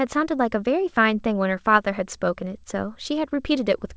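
No technical faults are audible.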